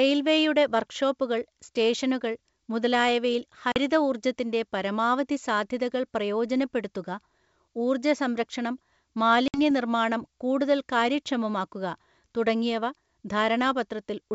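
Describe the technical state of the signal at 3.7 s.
Packet loss on an ADPCM call, 3.72 to 3.78 s: about two packets went missing and were replaced by silence, knocking the decoder's predictor and step size out of step. The speech breaks off with a hard-edged 40 ms gap, then returns with brief, slight distortion before settling.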